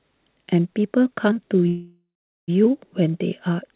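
At 1.68 s the speech stops and a call audio freeze begins, lasting to 2.50 s. The last sound is stretched into a fading buzz, then about 0.41 s of silence. Packets were likely delayed, emptying the jitter buffer. The speech then resumes where it stopped, with nothing lost.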